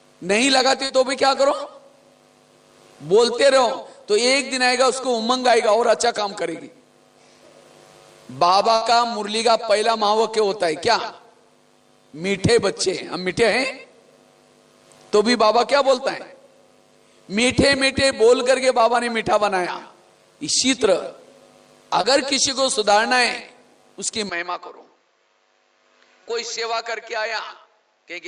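At 0.85 to 0.91 s, short concealed packet loss: 40 ms of audio never arrived, and the receiver extended the preceding sound to cover it. This leaves a brief smear, and on a spectrogram a short stretch of repeated, slightly blurred harmonics. A burst of packet loss at 8.75 to 8.83 s dropped 60 ms. The concealment holds the last sound and lets it fade, so it is heard as a brief held buzz or hiss before the audio jumps ahead. The waveform shows a decaying, repetitive patch there. Short concealed packet loss returns at 22.01 to 22.05 s, filling 20 ms with a brief smear. From 24.29 s to the end, the sound turns duller and quieter, about 10 dB down, with no silence at the change. Nothing above 7.6 kHz survives, which shows on the spectrogram as a sharp ceiling. A new noise floor sits about 45 dB below the signal. The likely cause is the input switching to a poorer device. Inside that stretch, at 26.23 to 26.27 s, another 20 ms short concealed packet loss adds a brief wobble.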